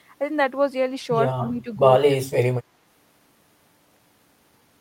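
From 1.35 to 1.72 s the speech dips by roughly 15 dB. From 2.01 to 2.24 s it drops harder, by around 25 dB. This is speech suppressed in double talk. An echo canceller likely mistook the talker for echo while both sides spoke.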